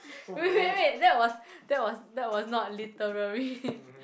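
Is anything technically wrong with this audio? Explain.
No, nothing is technically wrong with this audio.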